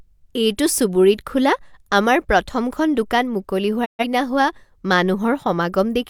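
Digital broadcast dropout from 3.84 to 4.05 s: the receiver lost valid frames and muted, so the speech fades out over 20 ms, leaving a short gap.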